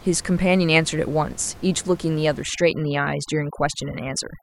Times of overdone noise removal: 2.43-4.43

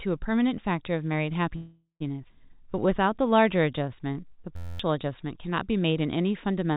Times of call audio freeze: 1.56-2.03

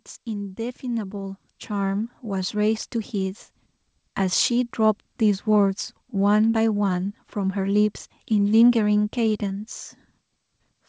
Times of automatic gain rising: 0.25-3.45

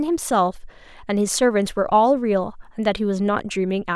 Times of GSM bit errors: none

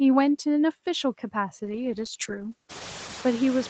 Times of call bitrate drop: 1.65-3.70

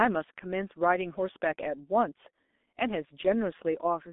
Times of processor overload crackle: none

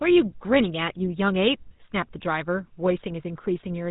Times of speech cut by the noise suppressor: none

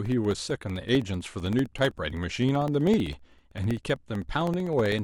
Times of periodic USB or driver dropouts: 0.06-4.99

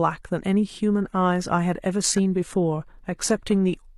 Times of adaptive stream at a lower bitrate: 0.97-3.98

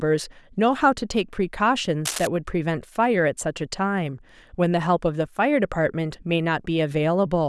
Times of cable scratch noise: 2.05-2.27

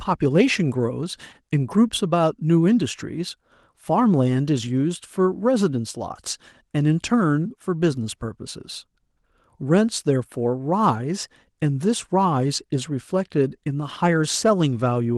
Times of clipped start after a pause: none

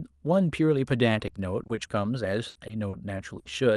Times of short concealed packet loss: 2.67-2.95

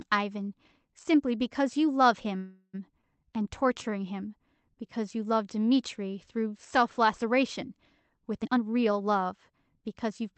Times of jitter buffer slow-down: 3.25-3.91

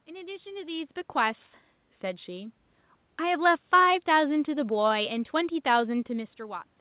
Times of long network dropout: none

